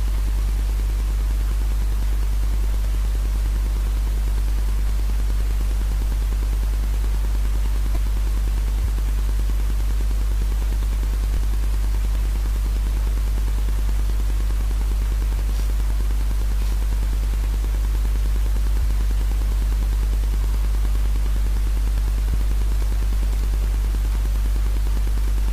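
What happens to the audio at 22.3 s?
At 22.33 s there is damaged data in a compressed stream: part of the encoded file is corrupt, so the decoder misreads that frame, loses sync and hunts for the next valid header. The result is a brief glitch lasting under 20 ms.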